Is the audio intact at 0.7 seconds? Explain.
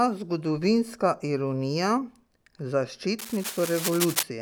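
Yes, the speech at 0.7 seconds plays through intact, with no dropout, click, distortion or other fault at that point.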